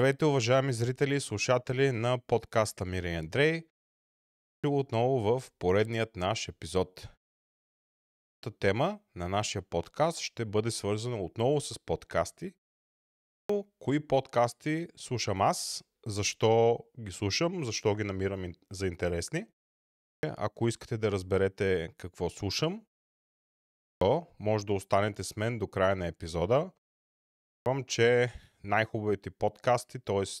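The output device drops into a sleep state during short pauses and needs nearly half a second to wake before it passes sound again, producing a clipped start after a pause at 4.15, 7.99, 13.04, 19.79, 23.51 and 27.19 s. Pauses of 0.34 to 0.9 s trigger it. Each time, 0.44 to 0.50 s of speech is swallowed, so the speech bursts abruptly out of silence with its opening sounds missing.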